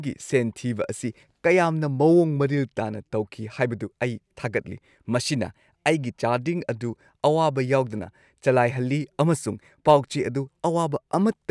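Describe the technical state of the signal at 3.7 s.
At 3.7 s the signal is intact, with no audible fault at that moment.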